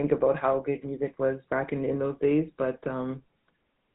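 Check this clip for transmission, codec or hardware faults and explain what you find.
The speech has passed through the GSM full-rate codec, and the damage runs through the whole clip. This first GSM codec models the vocal tract as a filter and excites it with a sparse train of regularly spaced pulses, discarding most of the excitation detail. The result fits the 13 kbps full-rate coder. Nothing survives above about 3.8 kHz, so sibilants lose their edge, and the voice carries a plainly audible buzzy, gravelly roughness.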